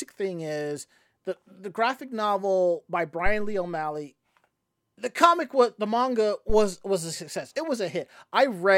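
Speech with two phantom power thumps. Deep low thuds hit after "the graphic novel by" at 3.26–3.73 s and before "was a success" at 6.50–6.77 s. They peak around -15 and -14 dBFS. A supply switching on or off on the live input sends its step through the coupling capacitors.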